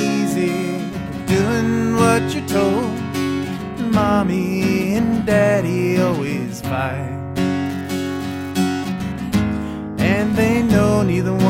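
From 7.65 to 8.51 s an unreliable data bit flips randomly, adding equal spikes of about −24 dBFS, heard as a steady crackling fizz.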